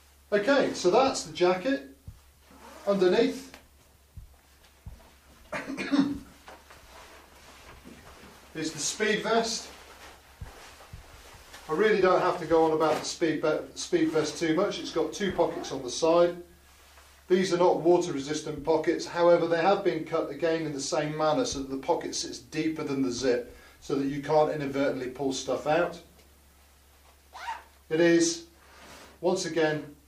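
No technical faults can be heard anywhere in the audio. Nothing in it stands out as a break, glitch or defect at any point.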